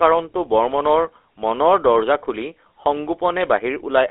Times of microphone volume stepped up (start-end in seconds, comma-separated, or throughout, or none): none